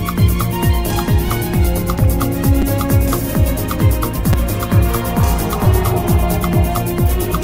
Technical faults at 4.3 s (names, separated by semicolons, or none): repeated buffer